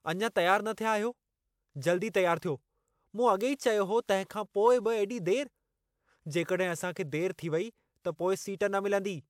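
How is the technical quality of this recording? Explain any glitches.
Nothing to flag here, as there are no glitches or technical faults to be heard anywhere in the speech recording.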